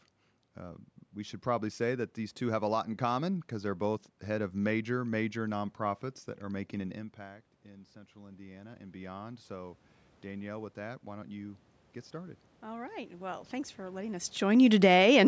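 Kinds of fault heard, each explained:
automatic gain rising: After the talker moves away around 7 s, the input drops about 18 dB, and the gain climbs about 14 dB from 6.51 to 14.35 s. Voice and room noise swell together, unlike a talker approaching, which lifts only the voice.
automatic gain falling: When the talker comes back near 14 s, the sound arrives too loud, then the gain is pulled down about 4 dB between 14.41 and 15.05 s. Voice and room noise sink together, which a talker leaning back would not cause.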